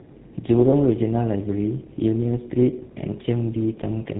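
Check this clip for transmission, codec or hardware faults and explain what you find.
The clip has one codec fault, present from start to finish: tandem speech coding. The speech appears to have passed through two low-rate speech codecs in a row, consistent with a G.729A leg at 8 kbit/s feeding a GSM full-rate leg at 13 kbit/s via a G.711 link. Each coder re-encodes the previous one's errors, so the damage compounds. The result is rough, muffled, warbling speech with nothing above 3.8 kHz.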